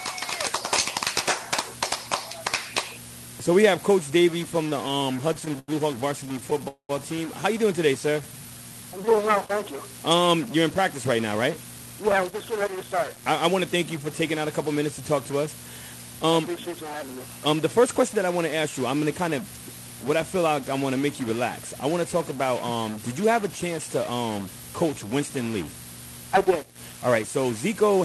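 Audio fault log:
throughout, stuck bit: Distortion rides on the whole clip, with noise filling the pauses. The likely cause is one data bit held at a fixed value.
4.63–5.70 s and 6.26–6.62 s, repeated stalls (stutter): The audio drags and catches, with 14 brief holds (longest 90 ms) and then 5 (longest 15 ms). Late packets kept emptying the buffer, and nothing is lost.
6.68–6.91 s, call audio freeze: A 210 ms hold fades to about 100 ms of silence before the audio resumes intact, likely because delayed packets emptied the jitter buffer.
8.06–8.93 s, jitter buffer slow-down: The audio stretches to about 86% speed at unchanged pitch, adding 134 ms, as repeated pitch periods rebuild a depleted buffer reserve.
10.71–15.33 s and 27.08–27.91 s, jitter buffer speed-up: The audio hurries to 106% and then 105% speed at the same pitch, as the receiver trims roughly 300 ms and then about 50 ms to reduce its backlog.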